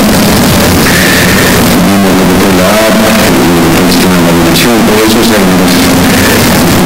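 From start to finish the audio is extremely loud and harsh, with the waveform flattened into a near-square shape sitting at an almost fixed, high level regardless of how quiet the source is. Background noise comes up to the same level as the main sound, though its pitch can still be traced. This is float read as integer: 32-bit floating-point samples were likely interpreted as 32-bit integers, so sign and exponent bits dominate each value.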